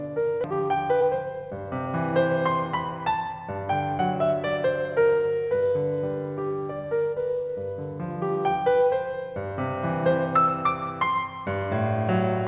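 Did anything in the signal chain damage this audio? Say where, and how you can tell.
Yes. At the network and jitter-buffer stage, a skip ahead occurs at 0.44 s. About a second of queued music was discarded, and playback jumps straight to later material with no fill. The two sides are butted together, so the musical phrase lurches abruptly.

Right after that, the jitter buffer speed-up trims its excess backlog by repeatedly cutting out short pitch-period slices. From 0.47 to 1.87 s the music runs at 117% speed, losing about 300 ms. From 2.65 to 4.16 s it runs at 108%, losing about 150 ms. Pitch stays put but the tempo rushes, all heard through the G.711 call path's 4 kHz ceiling.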